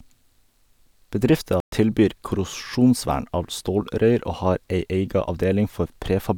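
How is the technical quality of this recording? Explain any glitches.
The recording has one glitch, a playback stall. At 1.60 s the speech drops abruptly into silence for 120 ms. It picks up again at 1.72 s with "tilbyr korrosjonsvern av". The likely cause is the player running short of data, or its thread being blocked, so output halts until it recovers. It sounds like a sudden hole in mid-flow.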